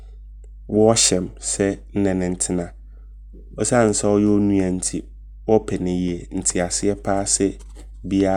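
Mains hum runs under the speech from start to end: a steady 50 Hz tone with low harmonics, about 20 dB down, leaking in from the power line, fixed in pitch unlike shifting rumble.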